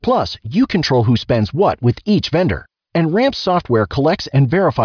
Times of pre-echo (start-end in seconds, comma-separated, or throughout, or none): none